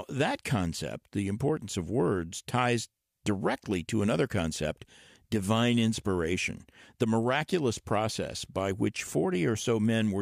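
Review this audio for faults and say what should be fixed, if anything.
Nothing here needs fixing, since no technical faults turn up anywhere in this speech recording.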